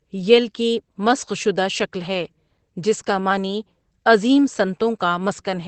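Opus voice compression runs through the whole clip, with plainly audible damage. The sound points to the codec's SILK linear-prediction mode at a low rate, which fits about 12 kbps with 20 ms frames. Nothing survives above 8.4 kHz, so the speech sounds muffled and lacks air. The excitation left over after linear prediction is coded coarsely, which gives voiced sounds a hoarse, slightly robotic edge.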